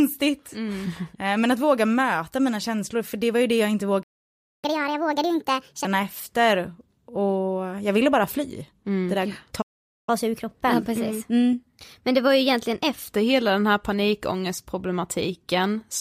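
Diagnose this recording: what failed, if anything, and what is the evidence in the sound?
The speech cuts out completely from 4.02 to 4.65 s (about 0.6 s) and from 9.61 to 10.09 s (about 0.46 s), then resumes where it left off. This playback stall likely comes from a buffer underrun at the player. The waveform drops flat, and the spectrogram shows blank vertical gaps.

Each gap is followed by catch-up at higher speed. From 4.65 to 5.85 s the audio runs 1.5 times fast, about seven semitones high, and from 10.09 to 13.09 s 1.15 times fast, about two semitones high. The player resamples its backlog, so spectrogram harmonics jump upward and syllables compress before settling back.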